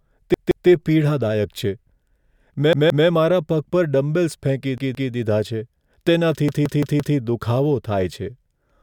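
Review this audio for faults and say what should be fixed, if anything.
Repeated buffer at 0.34–0.68 s, 2.73–3.07 s, 4.78–5.12 s (just before "દીધા છે") and 6.49–7.17 s. A 171 ms slice, which fits an 8192-sample buffer, replays twice, or four times in the last event, with hard joins. Unlike a dropout, nothing goes silent; the same sound stutters instead. Supply audio to the device on time, or give it more buffering headroom, so playback never starves.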